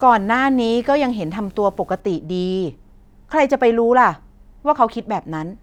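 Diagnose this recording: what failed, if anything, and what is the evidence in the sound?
Video or display buzz, analogue wiring, 0.0 to 2.0 s: a faint 75 Hz buzz with hash, coupled in at a display's field rate rather than 50 or 60 Hz mains.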